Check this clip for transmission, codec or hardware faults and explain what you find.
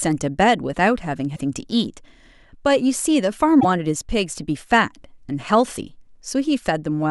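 There's a codec-level problem here: damaged data in a compressed stream, twice, from 1.32 to 1.40 s and 3.57 to 3.65 s. Corrupt bytes throw the decoder off, so it misreads those frames and hunts for the next valid header, leaving a short chirp, squawk, click or hole in the speech each time.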